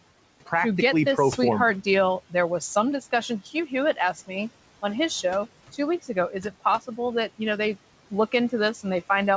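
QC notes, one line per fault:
Throughout, noise suppressor artifacts: the room noise, sitting about 19 dB under the speech, dips in the pauses and swells back beneath each phrase. The suppressor is pulling down the noise-dominated bands frame by frame, by about 17 dB.
3.29–3.71 s, speech cut by the noise suppressor: within this stretch, about a tenth of a second of the speech drops out, at worst by about 10 dB, so soft sounds come across swallowed. The suppressor misread those quiet parts as background noise and turned them down with it.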